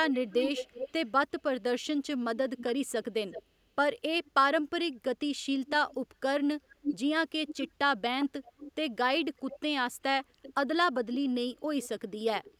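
Speech with a second, delayed copy of itself trailing behind it, arriving about 0.37 to 0.39 s late. It appears from 0.11 to 1.42 s, where it is strong, only about 5 dB under the voice, then more faintly from 2.58 to 4.31 s, and again from 5.67 to 12.54 s at roughly 10 dB down. This echo leak is likely a far-end loudspeaker whose echo canceller let part of the returning sound through.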